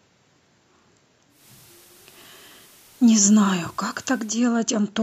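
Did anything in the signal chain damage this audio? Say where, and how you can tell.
Yes. The damage happened at reception, in a hybrid radio tuner. At 1.29 s this speech clip cross-fades over about 0.19 s into a hissier version of itself, and it fades back at 4.42 s. The level dips by about 1 dB, and the hiss sits roughly 30 dB below the speech. This is digital radio blending to analogue. The receiver lost the digital stream and fell back to the station's FM broadcast, then returned once the digital signal recovered.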